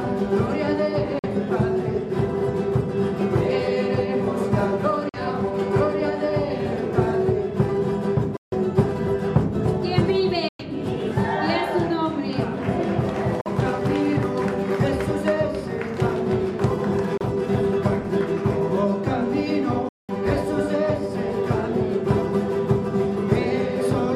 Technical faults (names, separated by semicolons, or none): Bluetooth dropout